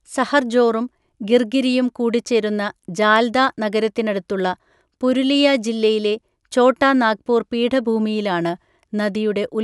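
No technical faults can be heard anywhere in the speech recording, and the signal keeps its continuity throughout.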